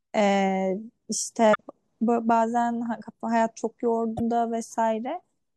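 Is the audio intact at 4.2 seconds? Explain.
No. There is damaged data in a compressed stream from about 4.17 to 4.21 s, a burst roughly 40 ms long in the speech. In that stretch the compressed bytes were lost, zeroed or overwritten, so the decoder either misreads those frames or discards them. It then loses frame sync and scans forward for the next valid header before normal decoding resumes. The result is a short chirp, squawk, click or hole in place of the intended sound.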